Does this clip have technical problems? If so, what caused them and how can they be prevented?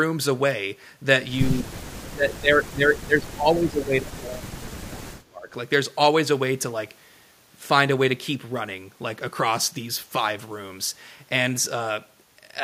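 Yes. Speech suppressed in double talk at 1.49–1.69 s and 1.96–5.48 s, likely from an echo canceller treating overlapping talk as echo: the waveform dips by about 20 to 25 dB and the spectrogram thins out in gaps. Better echo cancellation with double-talk detection would prevent it.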